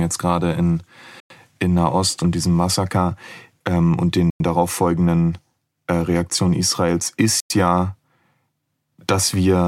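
Gap between chunks at 1.20, 4.30 and 7.40 s: the speech arrives in 3-second chunks with a 100 ms silence inserted at each join. Nothing is lost, but the flow stops abruptly, leaving short holes that recur every 3.1 s.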